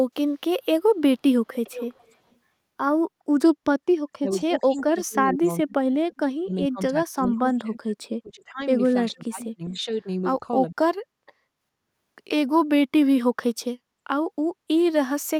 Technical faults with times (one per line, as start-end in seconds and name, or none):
1.53-2.14 echo leak
4.08-7.84 speech suppressed in double talk
4.77-4.82 echo leak
7.23-7.27 echo leak
8.22-8.63 speech suppressed in double talk
9.12-10.07 speech suppressed in double talk
10.40-10.44 speech suppressed in double talk
10.75-10.79 speech suppressed in double talk